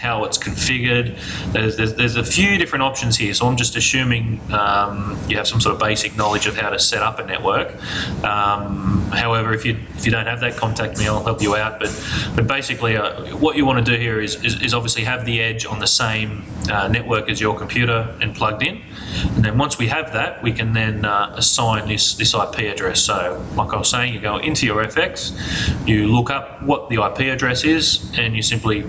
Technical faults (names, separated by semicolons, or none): gain pumping